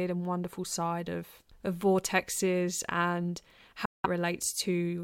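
A Bluetooth dropout runs from 3.85 to 4.06 s, just after "of of vortexes and". The speech cuts abruptly to silence for about 0.2 s, most likely because wireless audio packets arrived too late and were discarded. It then resumes further along, as though it had kept playing.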